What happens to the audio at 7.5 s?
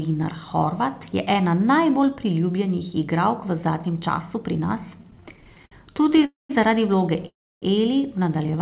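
At 7.5 s the sound stalls in a call audio freeze from 7.27 to 7.64 s, likely caused by packets arriving late and the jitter buffer running dry. A brief fading fill sinks into about 290 ms of silence, then the audio resumes exactly where it stopped. Unlike a dropout, nothing is lost, but everything after is delayed by about 343 ms.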